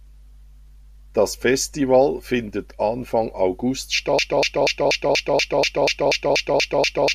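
At 4.19 s the speech locks into a broken-record loop: a fragment of about 241 ms repeats exactly, back to back, twelve times, and the clip ends still stuck in it at 7.14 s. The stream likely stalled and kept replaying the last piece it held, so whatever should have followed is lost. On a waveform the same shape stamps out at regular intervals; a spectrogram shows an identical block tiled end to end.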